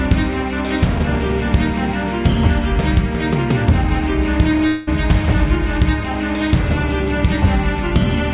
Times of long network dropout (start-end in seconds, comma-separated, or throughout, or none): 4.67-4.89